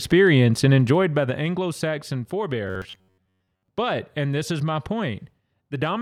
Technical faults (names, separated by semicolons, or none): zipper noise; robotic sound from repeated short buffers